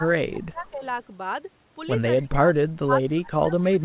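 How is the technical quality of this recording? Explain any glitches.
The recording has two call-processing problems: the speech is repeatedly pushed down during overlapping talk, and a faint echo slips through once. The audio has the narrowband sound of a telephone-grade call path, with nothing above 4 kHz.

Speech suppressed in double talk occurs from 0.0 to 0.82 s, 2.22 to 2.7 s, and 2.86 s to the end. Both ends were likely talking at once, and the echo canceller could not tell this talker apart from returning loudspeaker sound, so it attenuated everything. The voice dips by roughly 20 dB in the first and last stretches and about 25 dB in the middle one. In the first two passages, about half a second and about 0.4 s of the speech are affected, and it sounds muffled, thinned or partly cut out.

Echo leak appears at 2.17 to 2.22 s, just before the middle suppression. The far end was likely on a loudspeaker, and its echo canceller let some of its own microphone pickup through. 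That residue came back as a copy of the voice delayed by 264 ms, about 30 dB below the speech. It is heard as a brief, faint scrap of delayed voice.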